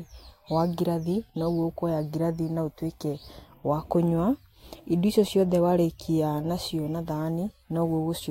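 Listening through the speech, nothing stood out as a technical fault at any point.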